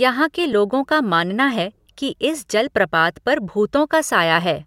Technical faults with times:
0.53 repeated buffer

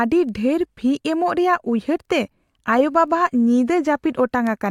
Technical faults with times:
0.29-4.47 word clock ticks

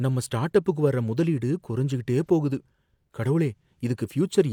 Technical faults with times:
none

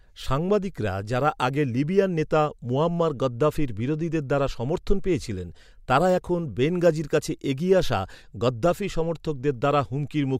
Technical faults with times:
none

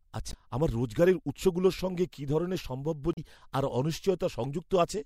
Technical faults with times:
0.30-0.34 damaged data in a compressed stream
3.13-3.18 damaged data in a compressed stream

